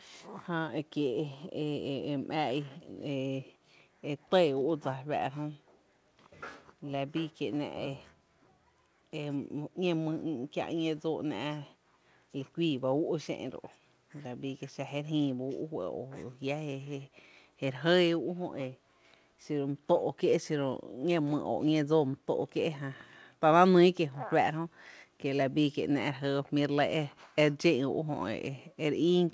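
No technical faults are audible.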